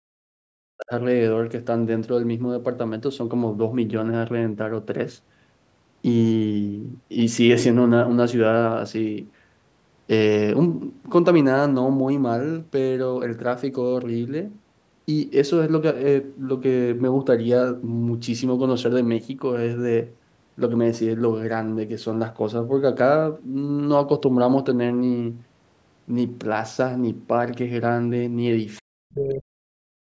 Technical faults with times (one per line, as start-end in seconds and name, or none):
0.00-0.92 speech suppressed in double talk
28.76-28.81 other side's voice leaking through
28.85-30.03 speech suppressed in double talk